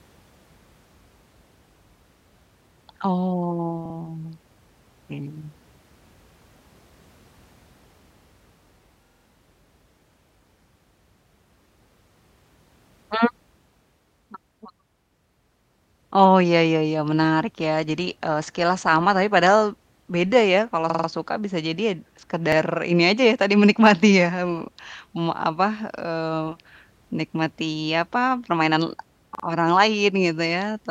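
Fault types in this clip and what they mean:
Repeated buffer: at 3.85, 9.06, 15.05, 20.90, 22.52 and 29.35 s, late audio made the device replay a 46 ms chunk one to four extra times, heard as stutters.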